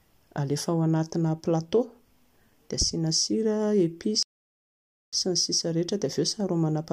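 At 4.23 s the speech cuts to silence for about 0.9 s, resuming at 5.13 s: a playback stall, likely from the player's buffer running dry.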